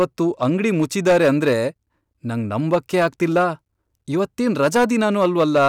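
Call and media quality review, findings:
Hard clipping, whole clip, speech. Crackle on louder syllables only. Gain stage or converter driven about 7 dB past full scale. Peaks flattened, adding high harmonics. A small share of samples affected. Unlike codec distortion, the grit tracks level, absent in quiet passages.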